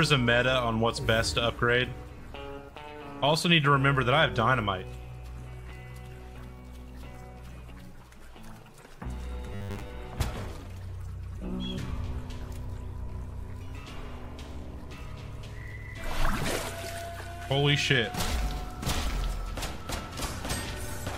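At 9.47 s the sound goes robotic for a little under half a second, running until 9.90 s. It has the fixed, metallic buzz you get from repeated short buffers, pinned at 100 Hz and roughly tracking the sound underneath. That pitch points to a 10 ms chunk being looped. The likely cause is audio arriving too slowly, so the playback side kept replaying the last chunk and skipped around half the real material.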